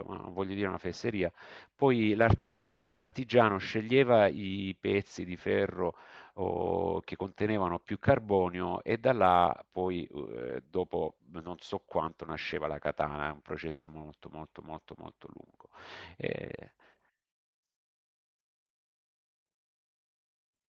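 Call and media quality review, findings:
Call audio freeze, 2.37–3.14 s. The sound stalls into a fading buzz for about 0.75 s, then resumes where it stopped with nothing lost. The likely cause is a late-packet stall that drained the jitter buffer. On a spectrogram, harmonics smear flat and decay, with a brief near-silent notch before the sound resumes.

Jitter buffer speed-up, 9.82–12.69 s at 109% and 16.51–17.11 s at 107%. The sound is hurried but the pitch holds. The buffer trimmed pitch-period slices to cut excess delay, roughly 0.3 s in the first stretch and a few hundredths in the second. The waveform shows cycles of unchanged length, with syllable spacing compressed on the spectrogram.

Long network dropout, 13.69–13.89 s. The sound decays into a hiss and then jumps forward, with about 0.18 s never played. The likely cause is lost packets, concealed until concealment ran out. On a spectrogram, decaying smeared energy ends in a near-blank strip, then the sound restarts abruptly. 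Above this, the spectrum stops near 12 kHz, as the Opus call path band-limits it.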